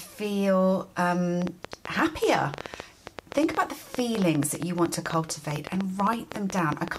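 A train of clicks runs from 1.42 s to 6.97 s: about fifty similar pulses at roughly 9.6 per second, irregularly spaced and peaking about 15 dB above the audio, ticking through pauses too. This likely comes from interference from nearby equipment or a faulty connection or power supply.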